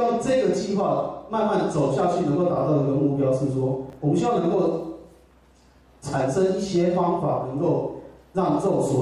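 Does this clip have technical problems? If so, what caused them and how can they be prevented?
Yes. Between 3.90 and 3.93 s the audio has chunks out of order: a 10 ms chunk arrives two chunks late, producing a brief jumble with three hard joins. Unlike a dropout, nothing is missing; the audio is only misplaced. Buffering and reordering chunks by sequence number before playback prevents it.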